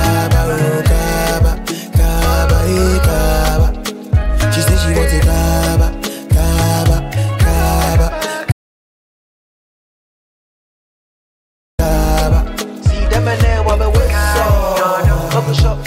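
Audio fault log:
8.52–11.79 s, audio dropout to silence: the sound stops abruptly in mid-flow and the signal falls to silence for about 3.27 s before resuming just as suddenly. Nothing survives in the gap, not even room tone or a noise floor, which separates it from a fade, where some background would remain. The likely cause is a lost input, such as a disconnected device or failed link, while the recorder kept writing silence, so whatever occurred in that stretch is gone.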